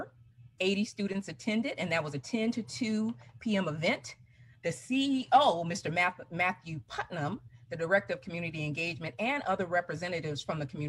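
No technical faults can be heard anywhere in this recording, and the signal holds steady and intact throughout.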